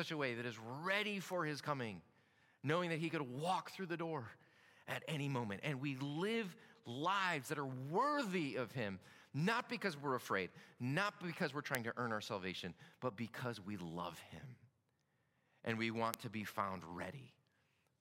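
Three sharp, isolated ticks land at 1.33 s after "way that is ready", at 11.75 s before "to earn our salvation", and at 16.14 s after "and we". The first is faint, peaking about −35 dBFS, and the later two are much louder at about −11 dBFS. Each is a bit error spike: a single flipped bit makes one sample jump by a power of two and snap back, producing a broadband click unrelated to the speech.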